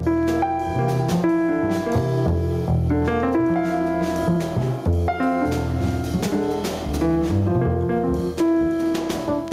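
Throughout the audio there is gain pumping, with the level swinging by around 15 dB. The likely cause is input gain set far too high, with a fast limiter clamping every peak and squashing the dynamics.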